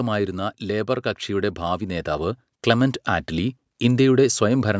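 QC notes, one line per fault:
0.59–3.61 s, automatic gain rising: the gain control judged the input too quiet and raised its gain by about 8 dB over three seconds, so speech and background swell together. The waveform envelope ramps steadily upward, and the spectrogram brightens evenly across all frequencies.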